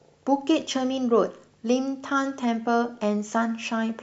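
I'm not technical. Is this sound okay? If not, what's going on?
Yes, it sounds fine.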